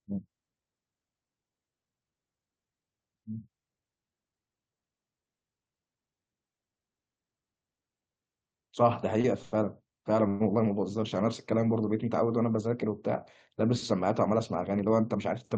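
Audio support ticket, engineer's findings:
Short stall from a late packet, 9.21–9.26 s: sound briefly held, slight buzz or dip. Jitter buffer ran dry when a packet arrived late; receiver stretched the last sound about 25 ms, then resumed at the same point. Nothing lost, playout delay grew 25 ms.

Call audio freeze, 9.42–9.54 s and 10.28–10.42 s: sound stops moving and holds as a buzz or hiss, never going silent. Likely network hold-up emptying the jitter buffer; receiver extended the last sound for about 100 ms, then about 120 ms. Playback resumed where it stopped, nothing skipped, delay increased by the same amounts. The Opus path at 48 kbps shows a top end near 12 kHz.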